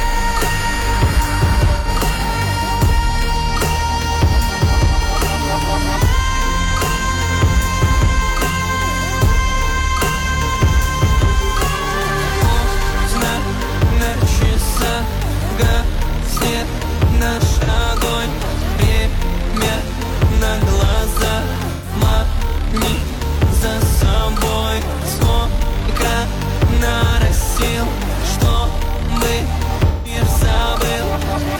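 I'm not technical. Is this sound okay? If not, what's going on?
No. AAC frame loss with concealment: small pieces of the compressed audio went missing, and the player patched each gap by guessing from the sound just before it. That leaves brief smeared, fuzzy or hollow-sounding blips at 1.76, 14.09, 17.63, 21.73 and 29.87 seconds, each shorter than a third of a second.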